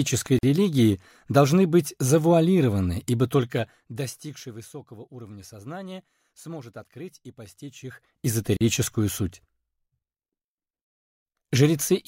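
Separately encoded pieces of this audio were joined without trimming the encoder delay and final-frame padding, leaving a gap at a join of encoded pieces in two places: from 0.39 to 0.43 s (46 ms) and from 8.57 to 8.61 s (40 ms). Each time, continuous sound drops into silence, with edges smeared by the codec, then resumes from where it stopped.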